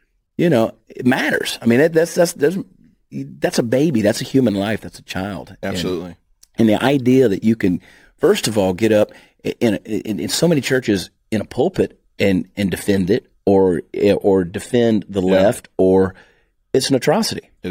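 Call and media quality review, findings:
Sample clock jitter, 0.00 to 10.85 s, clears just before "in a pulpit and". Hiss and grit riding on the speech, worst on loud, bright sounds, gone in pauses. Converter clock wobbling by several microseconds; error sits roughly 25 dB under the speech.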